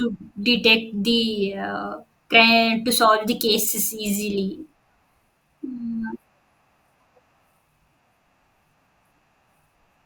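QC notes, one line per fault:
Nothing to flag here; the speech comes through fine the whole way.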